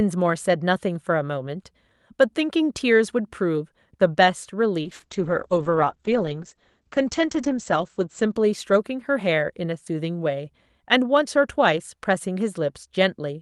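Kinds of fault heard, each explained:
Call bitrate drop: The call's bandwidth estimate fell and the encoder was pushed to a much lower bitrate, so it coded the speech more coarsely and narrowed its audio band. From 4.82 s to 9.71 s the sound turns rough and muffled, with the top end falling from about 12 kHz to 8 kHz. This fits a drop from around 48 kbps to 9 kbps, bottoming out for roughly 2.8 s before recovering.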